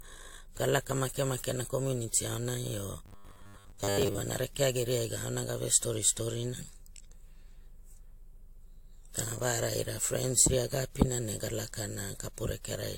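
Throughout the speech the top end sounds dull, and two different kinds of swirly, smeared codec artefacts overlap. This is likely transcoding between lossy codecs, pointing to WMA around 96 kbit/s re-encoded as AAC-LC around 64 kbit/s.

From 3.06 to 4.23 s the speech becomes a rigid, metallic 100 Hz buzz that only loosely follows the words. This is robotic sound from repeated short buffers, likely caused by repeating 10 ms chunks in place of most of the real audio.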